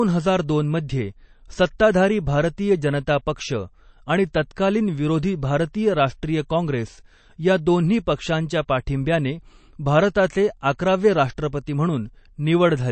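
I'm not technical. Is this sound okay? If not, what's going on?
No. Throughout, the speech sounds dull and plainly watery, with nothing above 8.3 kHz; this is likely MP3 compression squeezing the file too hard.

At 1.79 s, a brief hiss comes just before a sharp sound. This is pre-echo: the compression noise spills into the quiet moment ahead of the attack.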